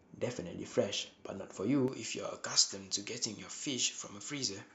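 Speech, and from 1.88 s to the end the pre-emphasis is left on: the treble boost applied before recording was never undone, so sibilants hiss and the tone turns thin, about 11 dB hot at 10 kHz relative to 1 kHz. The sudden switch and the steadily rising tilt, consistent with a J.17 curve, set it apart from lost bass or a fixed treble shelf.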